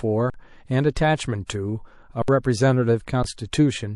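Throughout the speech, the sound has a watery, swirling quality with smeared attacks. This is plainly audible MP3 compression, likely at a low bitrate around 48 kbps, where the encoder drops weak frequency lines and high frequencies to save bits.

From 0.30 to 0.34 s, an underrun with a held sample flattens the waveform for about 43 ms, which fits a 2048-sample buffer running dry. The converter holds its last value, so the sound stops almost silently. Roughly 40 ms of live audio is skipped, and playback resumes.

From 1.46 to 1.49 s, pre-echo appears as a brief hiss about 28 dB above the surrounding level, spreading 30 ms ahead of a sharp attack. The attack fell late in a 48 ms transform window and the encoder never switched to short blocks, so the quantisation noise spread backward into the quiet moment before the attack and softened it.

From 2.22 to 2.28 s, a second underrun holds the output flat for 64 ms and skips about 70 ms of audio. 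At 3.23 s, a third underrun holds for about 15 ms and drops roughly 15 ms of audio.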